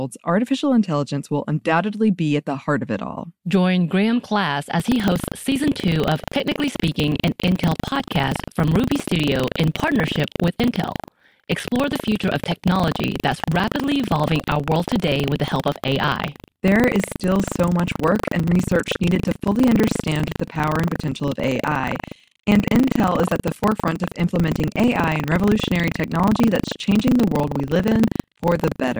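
Buffer tearing runs from 4.76 s to the end. The writer and the hardware reader of the ring buffer have slipped, so in each 40 ms period about a tenth holds audio from roughly 150 ms earlier, hard-spliced in. The result is a robotic 25 Hz rattle riding on the speech.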